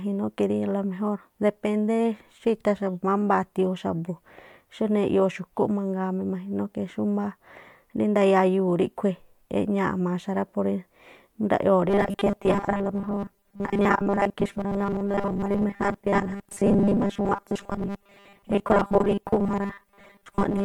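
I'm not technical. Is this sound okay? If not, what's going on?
No. From 11.89 s to the end there is robotic sound from repeated short buffers: the speech turns into a stiff, metallic buzz at 200 Hz. Likely, audio arrived too slowly, so the software kept replaying the last 5 ms, and most of the real sound was skipped.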